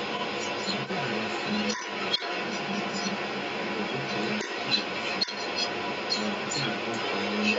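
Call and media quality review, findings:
Echo leak: delayed copy of the speech present across the whole clip, trailing by 178 ms and roughly 5 dB above the direct speech. Likely far-end loudspeaker pickup not removed by its echo canceller.

Speech suppressed in double talk: brief dips in the speech at 1.75–1.83 s (roughly 10 dB) and 5.26–5.39 s (roughly 5 dB). Likely the echo canceller attenuating during overlap with the echo.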